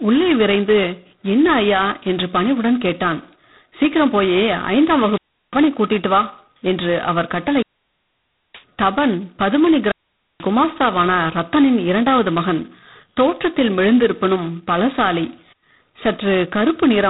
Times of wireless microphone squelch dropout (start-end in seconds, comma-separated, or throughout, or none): 4.92-5.72, 7.48-8.66, 9.79-10.51